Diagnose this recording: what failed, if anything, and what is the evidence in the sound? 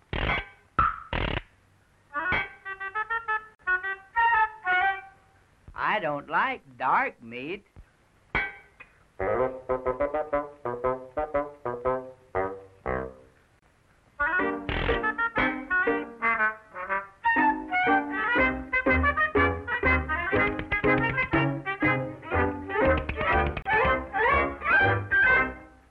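It's a codec-stage problem: a gap at a join of encoded pieces, every 10 s, at 3.55 s (44 ms), 13.59 s and 23.62 s (31 ms each). Separately encoded chunks got joined untrimmed, so start delay and last-frame padding leave silence before the sound carries on.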